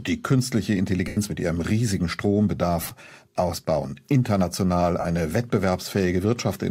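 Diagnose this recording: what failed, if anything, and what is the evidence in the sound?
The failure is at the Bluetooth link: lost LE Audio frames, concealed by the LC3 decoder. At 1.08–1.17 s, about 90 ms drops out. The decoder repeats the last spectrum with randomised signs, so the sound smears into noise and fades. At 2.82–2.91 s, 60 ms is lost in short gaps spread over 90 ms, the longest around 20 ms. At 5.00–5.05 s, 45 ms is lost. The gap lengths fit 7.5 ms frames. The light codec softening is ordinary for the link.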